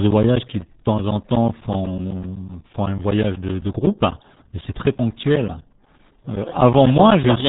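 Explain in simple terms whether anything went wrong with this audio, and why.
Yes, two things went wrong.

The whole recording has been squeezed through the RealAudio 14.4 codec, an old format built for dial-up modems. Nothing above about 3.8 kHz survives, so the speech sounds muffled, and the heavy compression adds a gargly, bubbling texture. That texture is what sets it apart from a plain treble cut or a cheap microphone, which would sound dull but still smooth.

There are also periodic USB or driver dropouts. From about 0.11 s to 7.37 s, the computer's audio path briefly stalled every 0.125 s, eight times a second, roughly 50 times in all. Each time, about 10 ms of sound was replaced by silence, which you hear as a steady ticking under the speech. Random clicks from a bad cable or a scratched source would come at uneven moments, but these land on a strict, clock-like beat.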